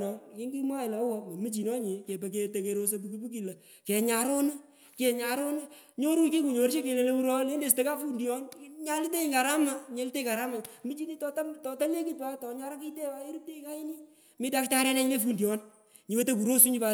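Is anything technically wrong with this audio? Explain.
No, nothing technically wrong stood out on listening to this speech recording.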